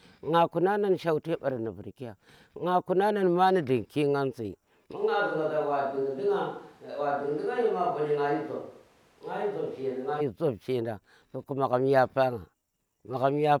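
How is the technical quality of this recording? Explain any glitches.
One glitch stands out. From 4.98 to 10.19 s the speech turns hollow and roomy, loses bass, and drops roughly 5 dB, with room noise rising to around 35 dB below it. It's likely a switch to a distant microphone: the close mic dropped out, so a farther one picked up more room, then it snaps back.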